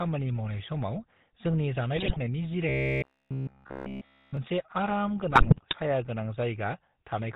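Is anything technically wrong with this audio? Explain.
Yes. The whole clip carries GSM full-rate codec damage, with two bursts of GSM bit errors and one stretch of robotic sound from repeated short buffers.

GSM full-rate codec, throughout: pulse-driven vocal-tract coding, consistent with a 13 kbps stream, cuts everything above 4 kHz. The speech sounds plainly buzzy and gravelly.

GSM bit errors, 1.96 to 2.19 s and 5.31 to 5.76 s: corrupted filter, pitch and gain values distort frame after frame, 10 frames in the first burst and 22 in the second. The speech breaks into squawks, pops and gargling.

Robotic sound from repeated short buffers, 2.69 to 4.37 s: the speech becomes a rigid metallic buzz at 66.7 Hz. All of it is repeated. The likely cause is late audio patched by looping roughly 15 ms segments.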